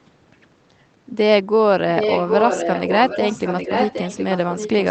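From 1.97 s to the end, an echo leak is heard: the likely cause is a far-end echo canceller that failed to remove what its microphone picked up from the loudspeaker, so that sound was sent back down the line. The result is a second copy of the speech trailing the original by about 0.77 s and only a few decibels quieter, heard over the band-limited, codec-coloured sound of the call.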